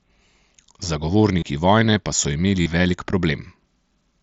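Twice the speech hits concealed Bluetooth headset packet loss over what sounds like an mSBC wideband link. From 1.40 to 1.42 s, just before "vojne pa so", about 22.5 ms goes missing, roughly three frames' worth, and the receiver patches it by repeating the best-matching recent stretch of waveform, giving a short buzzy hold. The second gap, 2.62 to 2.66 s right after "vojne pa so", is 45 ms, long enough to hear as a brief buzzy hold with a slight warble as real audio returns.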